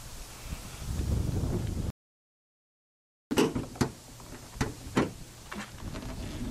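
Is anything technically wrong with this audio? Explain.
Yes, two faults are audible.

Audio dropout to silence, 1.90 to 3.31 s: the input was likely lost while recording continued, leaving 1.4 s of dead digital silence with no room tone.

DAB burbling, 5.97 to 6.29 s: bit errors at a rate of a fraction of a percent slipped past error correction, putting short blips of noise in single sub-bands across 14 frames.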